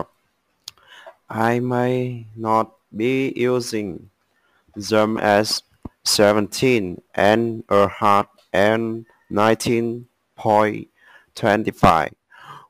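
No technical faults can be heard anywhere in the audio, and the signal stays steady and intact throughout.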